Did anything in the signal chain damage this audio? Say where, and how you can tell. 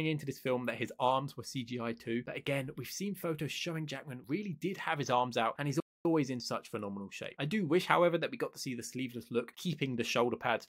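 Yes: a playback stall at 5.8 to 6.05 s. The sound cuts out mid-flow for about 250 ms of silence, then picks up again. This points to the playback stage: the player likely ran short of buffered data or had its output thread blocked until it recovered.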